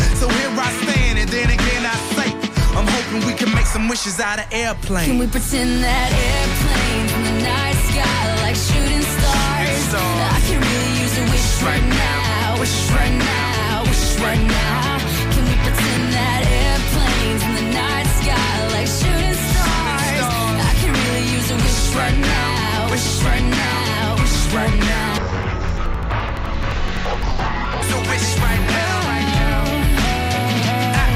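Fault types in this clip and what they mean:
Interleaved audio read as planar, 25.18 to 27.86 s: each 85 ms block splits into half-speed halves, so sound drops an octave, doubled and choppy.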